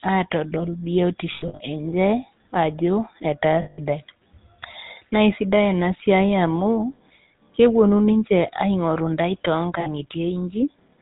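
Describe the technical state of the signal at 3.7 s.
At 3.7 s the sound sits inside a stretch of lost GSM frames running from 3.62 to 3.79 s, about 160 ms, which fits roughly eight 20 ms frames. The decoder fills the gap by reusing the parameters of the last good frame, so the sound freezes into a rough, metallic ring. A simple dropout would cut to silence instead, and a buffer repeat would loop the clean waveform rather than ring.

Underneath, the whole passage carries the GSM full-rate codec, consistent with its 13 kbps rate. The vocal tract is modelled and excited by regularly spaced pulses built from only every third sample, which gives the speech a buzzy, gravelly grain, and nothing above 4 kHz gets through. Plain band-limiting would sound muffled but smooth. Here the roughness is in the texture itself, and the damage is plainly audible.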